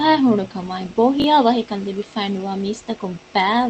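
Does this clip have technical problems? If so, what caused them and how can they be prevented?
Yes. Around 1.2 to 1.24 s there's a brief jumbled moment where chunks play out of order, like a 20 ms chunk landing just after the one meant to follow it. Sequence-number and reorder incoming chunks in a jitter buffer before playback.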